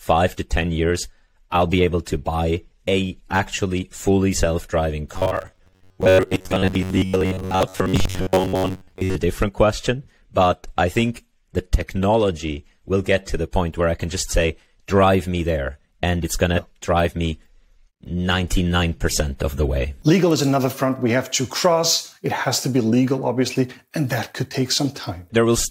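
Robotic sound from repeated short buffers runs from 5.14 to 9.15 s. The audio takes on a rigid, metallic buzz pitched at 93.8 Hz, which still loosely tracks the shape of the sound. The likely cause is new audio arriving too seldom, so playback fills the gaps by looping the last fragment of about 10.7 ms over and over, repeating for most of the stretch while the missing material is simply skipped.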